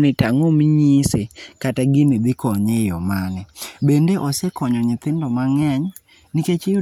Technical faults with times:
none

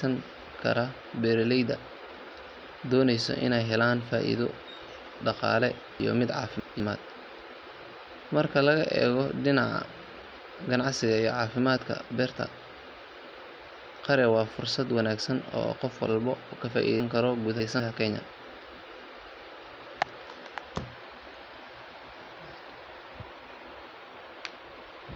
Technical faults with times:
6.00-6.80 chunks out of order
17.00-17.80 chunks out of order

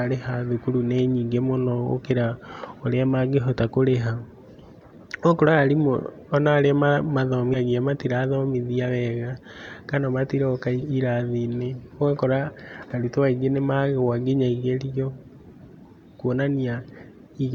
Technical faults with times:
5.57 compressed frames skipped
7.53-7.57 compressed frames skipped

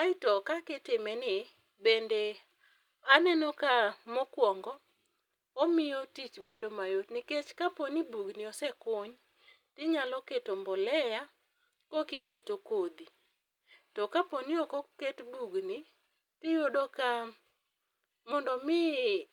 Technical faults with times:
6.40-6.63 long network dropout
12.13-12.43 long network dropout

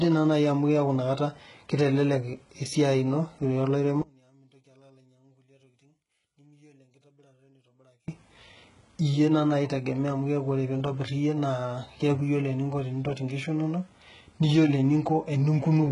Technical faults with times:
0.00-15.92 HE-AAC compression
4.02-8.08 one channel inverted

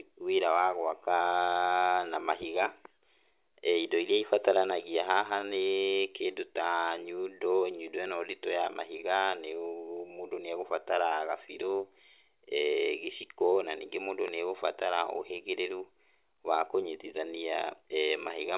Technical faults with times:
none

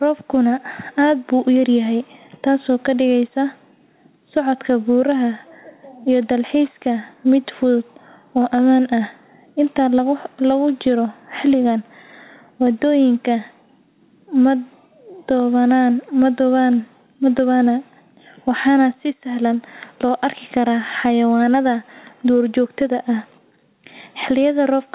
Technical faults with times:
0.00-24.95 gain pumping

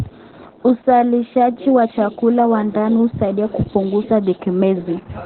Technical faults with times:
0.00-5.26 Opus voice compression

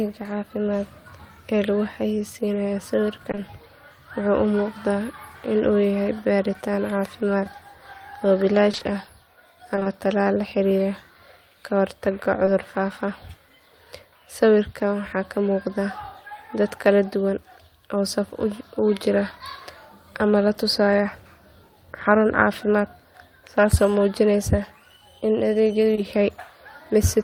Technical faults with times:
3.31-3.39 short concealed packet loss
7.43-7.47 short concealed packet loss
8.71-9.87 repeated packet loss (robotic sound)
12.45-12.49 short concealed packet loss
25.95-25.99 short concealed packet loss

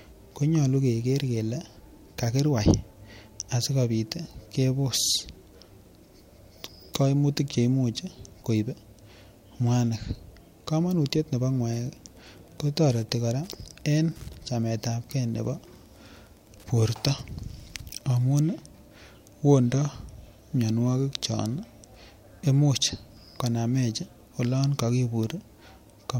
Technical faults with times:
11.71-18.32 Wi-Fi interference

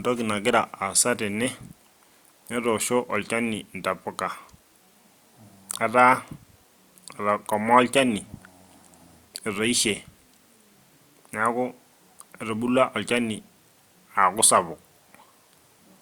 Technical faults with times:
0.00-16.02 low-bitrate audio saved at a high bitrate

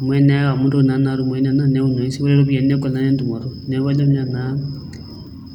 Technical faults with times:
none

